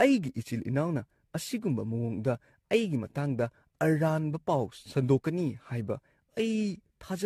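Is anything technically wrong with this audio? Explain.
Yes. Generation loss affects the whole clip. The speech sounds swirly, smeared and hollow. Attacks are blurred. The likely cause is about seven lossy passes, fitting a 64 kbit/s AAC-LC encode. Each pass requantised on a shifted frame grid, stacking up noise and spectral holes.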